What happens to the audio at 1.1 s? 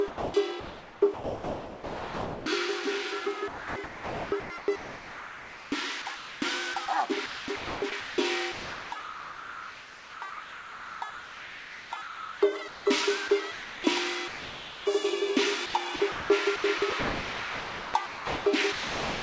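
At 1.1 s the sound is choppy, with holes in it from 0.08 to 2.46 s. This is likely sound chopped by the voice detector, which repeatedly swapped the quieter parts for comfort noise, about 2 s of the stretch in all.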